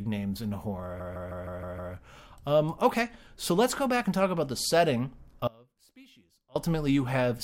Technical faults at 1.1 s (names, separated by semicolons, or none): repeated frames